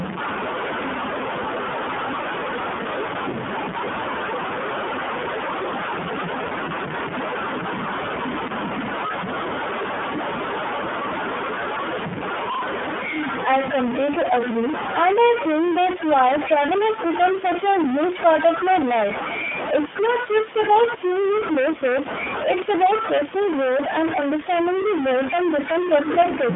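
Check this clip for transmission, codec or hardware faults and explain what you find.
Two faults run through the whole clip: a stuck bit and iLBC coding.

Stuck bit, throughout: the speech carries a distortion that follows the waveform, and the pauses are filled with noise instead of falling silent. The likely cause is a single data bit held at 0 or 1 by a broken line or converter, so about half the samples are pushed off by that bit's weight. Near silence the error flips with the sign of the tiny values, which keeps the gaps noisy.

iLBC codec, throughout: the audio has been squeezed through a narrowband VoIP codec, audibly so. The sound fits iLBC's 30 ms frame mode at about 13.33 kbps. Each frame's excitation is coded on its own, without borrowing from the previous one, so the speech stays clear but comes out slightly rough and synthetic. The band sits at telephone width, roughly 150 Hz to 3.5 kHz, with nothing at all above 3.7 kHz, giving a muffled, boxed-in quality.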